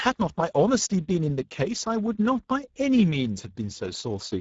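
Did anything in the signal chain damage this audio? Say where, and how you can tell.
Yes, at the codec stage, across the whole clip: Speex codec damage is plainly audible. The speech sounds hoarse and noisy because CELP at a rate near 10 kbps starves the excitation. A spectrogram shows a hard ceiling at 7.7 kHz, with the top band a structureless noise smear.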